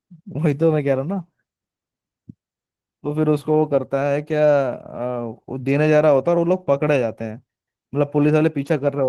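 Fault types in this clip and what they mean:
Opus voice compression: the speech sounds hoarse and faintly robotic throughout, consistent with 16 kbps coding; a spectrogram shows coarse, patchy, smeared energy above 8 kHz.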